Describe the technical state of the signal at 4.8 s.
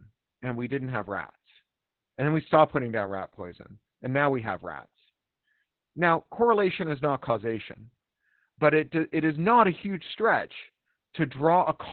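At 4.8 s the speech carries Opus voice compression, present throughout. Heavy linear-prediction coding at a bitrate that sounds around 8 kbps leaves it muffled, hoarse and slightly robotic.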